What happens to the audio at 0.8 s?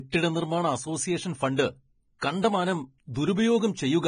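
At 0.8 s the speech carries the same damage as the whole clip, most likely from low-quality Vorbis compression at a bitrate of around 21 kbps. The codec keeps only a smooth spectral outline and codes the detail on top of it so coarsely that much of the treble becomes noise of similar energy, and it removes everything above 9.7 kHz. The result is heavy, hissy, grainy speech with dull highs, roughened tones and blurred attacks.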